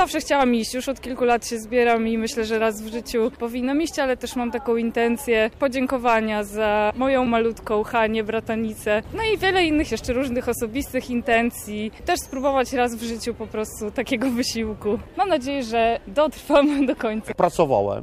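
No technical faults occur at any point in the audio, so there is nothing to describe in time order.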